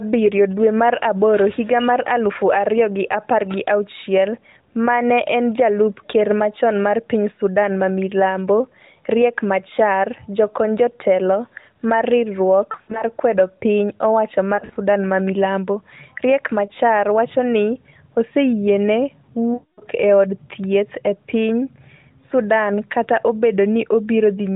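A speech clip carried over the AMR narrowband mobile codec. Nothing above 4 kHz passes, and the coding damage is light, which fits the 12.2 kbps mode. At 2.54 s there is hard clipping. A peak overdrives the stage by about 1 dB and is cut flat. That gives one brief crackle. Lost AMR speech frames occur four times. At 12.72 to 13.03 s, about 140 ms goes missing in short gaps across 280 ms. The longest gap is 60 ms. At 14.56 to 14.77 s, 100 ms goes missing across 200 ms, in gaps up to 40 ms. At 16.66 to 16.70 s, a single 20 ms gap gives a quick dip. These are heard as short warbles and dips. The decoder repeats the last good pitch and vocal-tract settings at falling gain. The worst loss is at 19.54 to 19.84 s. There, 260 ms of the 280 ms is lost, with one run of 240 ms. The sound drags, then fades to silence and comes back weak.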